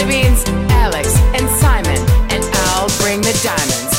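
No dropouts, clicks, distortion or level jumps turn up anywhere in the clip.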